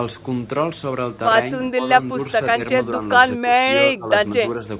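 The speech dips in level in short bursts at 1.75–1.89 s, 2.11–2.18 s, 2.55–2.6 s, 3.37–3.7 s, 3.94–4.11 s and 4.37–4.66 s. The dips are slight at 2.55 s and 4.37 s, and deepest at 3.37 s and 3.94 s, at about 20–25 dB. This is likely speech suppressed in double talk: the echo canceller mistook the talker for loudspeaker echo and pulled the level down. The whole clip is band-limited to 4 kHz, which fits a G.711 narrowband call.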